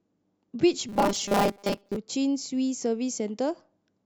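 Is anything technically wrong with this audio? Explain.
Yes. From 0.89 to 1.96 s there's robotic sound from repeated short buffers: a rigid 200 Hz buzz, likely from a 5 ms chunk looping while most of the real speech gets skipped.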